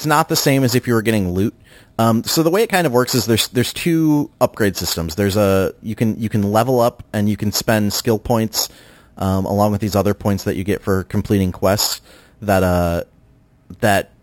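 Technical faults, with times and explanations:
Throughout, imaging from sample-and-hold upsampling. Samples were repeated without smoothing, which fits a 12 kHz original. A mirrored metallic fizz fills 6 to 12 kHz, about 15 dB down.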